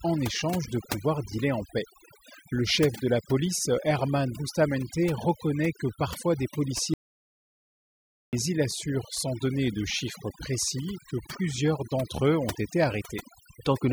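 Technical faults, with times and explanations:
Throughout: overdone noise removal. The background between phrases drops and breaks up into twinkling specks where isolated frequency bands flicker on and off. The reduction was set too aggressively, so any band whose level lands near the estimated noise floor is pushed far down or removed outright. Low-level parts of the speech fall under that threshold as well and are stripped out.
6.94 to 8.33 s: audio dropout to silence. After "reconnaît que parfois des", the speech stops abruptly and the signal drops to silence, with no room tone and no trace of the processed background. It resumes mid-flow at "il assure sans donner". About 1.39 s of audio is missing. The likely cause is a momentary loss of the input, such as a disconnected device, a failed link or an accidental mute, while the recorder went on writing silence.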